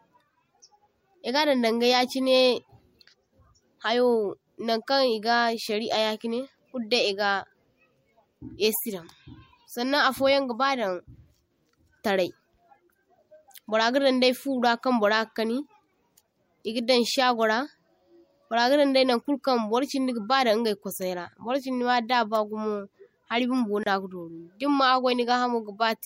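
Speech recording with a 29 ms dropout at 23.83–23.86 s, just after "hadda bagumo hari bumbo": a gap at a join of encoded pieces, left by untrimmed encoder delay and end padding.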